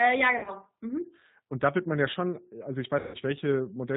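Throughout, the speech sounds band-limited, slightly rough and synthetic, with plainly audible codec damage and no content above 4 kHz. This is the G.729 codec at 8 kbit/s, which rebuilds each 10 ms frame from a vocal tract filter, a pitch predictor and a handful of pulses.

From 0.39 to 0.51 s, and again from 2.99 to 3.17 s, the speech smears into a buzzy tone or coloured noise that fades. It stays weak for a moment after each gap. This is VoIP packet loss concealed by the speech codec. The decoder kept extrapolating from its last pitch and filter at falling gain. The first gap spreads about 60 ms of loss over 80 ms, with a longest run of 40 ms. The second loses 150 ms.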